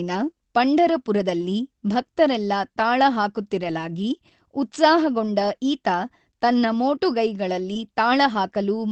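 Speech over what sounds like an Opus call path, top end cut at about 8 kHz, and there are a couple of packet-loss problems. First, lost packets rebuilt from error correction: at 0.95–0.97 s, 3.63–3.69 s and 7.75–7.77 s the audio turns briefly rough and grainy instead of dropping out, because the decoder played the low-bitrate backup copy carried in the next packet. The 40 ms patch at 3.6 s fits two lost packets. Second, a short concealed packet loss at 7.73–7.77 s: about 15 ms had to be filled by extending the previous sound before blending back, so you get a quick smear right where that last rebuilt frame sits.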